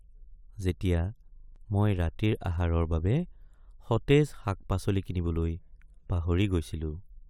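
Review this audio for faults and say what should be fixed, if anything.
A system hang loop from 1.36 to 1.56 s repeats one 40 ms slice exactly five times, buzzing at 25 Hz. Unlike a dropout's silence, identical audio loops. Prevent it by keeping the driver and audio thread from stalling.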